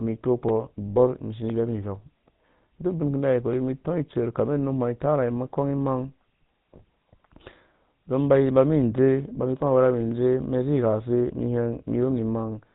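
Speech passed through the GSM full-rate codec, which fits the 13 kbps full-rate coder. It rebuilds the voice from a vocal-tract model driven by a sparse, regularly spaced pulse excitation and discards everything above 4 kHz. The damage is plainly audible throughout: the voice sounds dull and band-limited, with a buzzy, gravelly roughness. Lost GSM frames also occur between 0.9 and 0.98 s. The gap points to about three 20 ms frames going missing, roughly 60 ms of signal. The decoder covered the loss by repeating the parameters of the last good frame, so instead of a clean gap there is a brief rough, metallic ringing before normal decoding resumes.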